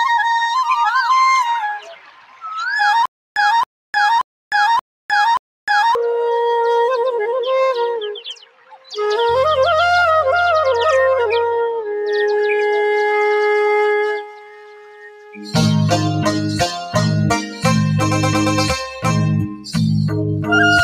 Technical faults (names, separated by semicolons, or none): noise suppressor applied to music or sounds; sound cut by the noise suppressor; stutter with silent gaps